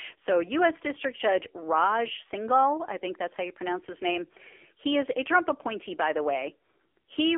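Throughout, AMR narrowband mobile codec coding removes everything above 3.6 kHz and leaves plainly buzzy, synthetic speech, which fits a low 7.4 kbps mode.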